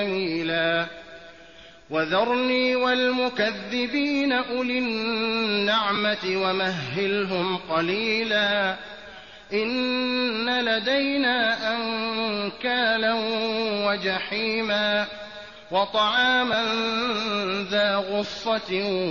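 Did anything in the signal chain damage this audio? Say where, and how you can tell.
Yes, the Bluetooth link dropped a few LE Audio frames. There are three brief gaps: one from 5.95 to 5.98 s lasting about 15 ms, which fits two 7.5 ms LC3 frames, and single-frame dropouts of 7.5 ms at 16.53 s and 18.24 s. They don't go silent. Instead the LC3 decoder's concealment repeats the last spectrum with scrambled phase, so each one comes through as a short noisy smear. The light codec compression underneath is just the normal transport.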